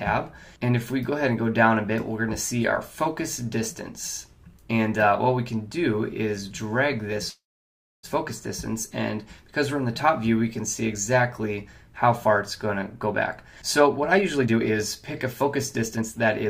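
At 7.29 s the audio stops moving forward in a call audio freeze that lasts until 8.05 s. The last sound carries on briefly as a fading buzz or hiss and then drops to silence for about 0.63 s. Playback resumes exactly where it halted, so nothing is lost. The 0.74 s gap simply pushes everything after it later. The likely cause is delayed packets draining the jitter buffer, with the receiver holding the last sound until data arrived.

Two jitter buffer speed-ups follow. From 13.62 to 14.74 s the audio runs at 126% speed, and from 15.43 to 16.49 s at 112%. Pitch stays unchanged while the pacing sounds hurried. The receiver is trimming short pitch-period-length pieces in quick succession to shrink an overfull buffer, removing roughly a third of a second in the first stretch and about half that in the second.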